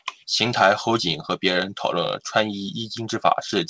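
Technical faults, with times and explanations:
Nothing faulty is audible anywhere in this speech.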